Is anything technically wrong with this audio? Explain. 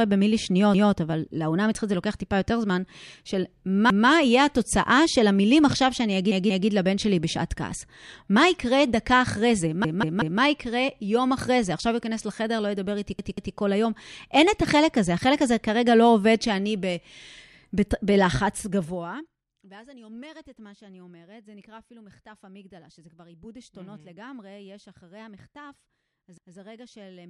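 Yes. Repeated buffer at 0.74, 3.90, 6.32, 9.85, 13.19 and 26.38 s: new audio missed its deadline, so the device replayed its last block of about 186 ms, which fits an 8192-sample buffer. That fragment stutters with a hard join, once, twice at 6.32 and 13.19 s, and three times at 9.85 s.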